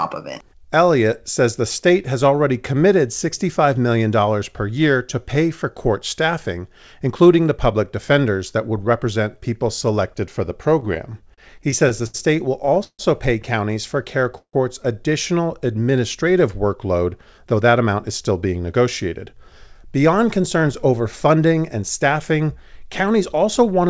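Speech carried over a call path whose audio stops at 8 kHz, which fits a wideband codec such as G.722, and three delivery faults stand out. From 10.80 to 13.02 s, between "people selected for the" and "pay counties", there are repeated stalls (stutter): sixteen short gaps where packets arrived late and the jitter buffer kept running dry, so the receiver stretched the last sound to cover them. The fills total 390 ms, about 18% of that span, with the longest at 150 ms. Nothing is lost, but the phrase drags and judders. At 14.38 s there is a single hold of 152 ms, most likely a call audio freeze, in which the receiver extends the preceding sound as it fades and then falls silent for 80 ms before playback resumes where it left off. The whole 152 ms becomes extra delay, and nothing is dropped. From 17.38 to 21.38 s, ending just before "and staffing", a jitter buffer speed-up takes place. The buffer had built up more audio than its target, so the receiver repeatedly cut out pitch-period-length slices, roughly a third of a second in total. 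Speech in that stretch runs about 8% fast at unchanged pitch and sounds hurried.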